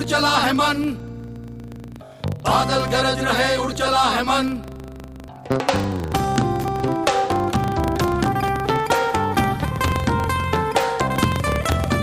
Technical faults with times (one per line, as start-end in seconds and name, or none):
0.00-12.02 filter restarted on every block